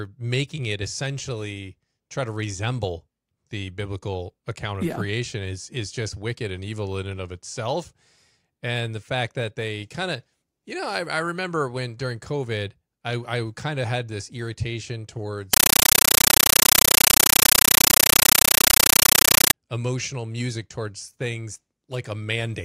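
Speech, interrupted from 15.53 to 19.53 s (after "of had this irritation", before "emotional music towards things") by a compressed stream played as audio: an undecoded AC-3 bitstream, consistent with about 448 kbps, heard as loud chattering static. The waveform shows 9.3 ms noise bursts separated by silence, 31 times per second. On a spectrogram these appear as broadband vertical stripes.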